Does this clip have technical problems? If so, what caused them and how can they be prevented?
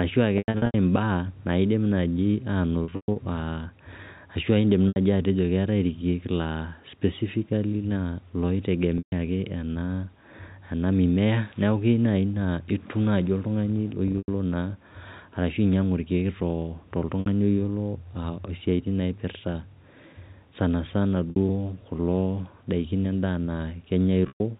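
Yes. Eight brief dropouts sound like held, buzzy stretches, with the longer ones fading out before the speech returns. They fall at 0.38–0.74 s (just before "imbaak naidim naaji"), 2.84–3.16 s (right after "imbaak naidim naaji"), 4.88–4.96 s (between "ashu indim" and "atejo keetae irkiek laa"), 8.98–9.12 s, 14.08–14.28 s, 17.20–17.26 s, 21.30–21.36 s and 24.28–24.40 s. This is packet loss with pitch repetition. Audio packets, which fits 20 ms packets, failed to arrive, and the receiver filled each gap by repeating the last pitch period.

The missing audio totals 60 to 260 ms per event. In the first, second and fifth events the losses are scattered over 200 to 360 ms, with runs of up to 120 ms. Those longer runs are where the repeated cycle fades away instead of simply buzzing. The G.711 A-law telephone coding underneath adds only its narrow band below 4 kHz.

To prevent this, carry the call over a less congested or prioritised network path with an adequate jitter buffer, or add forward error correction so lost packets can be rebuilt.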